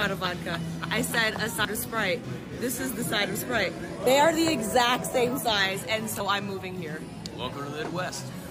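Whole compressed frames were dropped at three points, about 1.56 to 1.65 s, 4.07 s and 6.11 to 6.30 s, so this audio lurches forward by roughly a tenth of a second each time.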